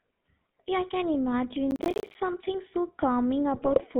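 Speech coded with the GSM full-rate codec throughout, with a buzzy, gravelly roughness; the spectrogram shows energy confined to about 150 Hz to 3.7 kHz, which fits the 13 kbps full-rate coder. From 1.71 to 2.15 s, processor overload crackle tears through the speech as the processor keeps missing its deadlines. The waveform shows dozens of short silent dropouts, which fits buffers of around 10 ms each. From 3.54 to 3.81 s, GSM bit errors make the decoded speech squawk and gargle. The spectrogram shows smeared, distorted frames, a pattern that points to roughly a dozen corrupted frames.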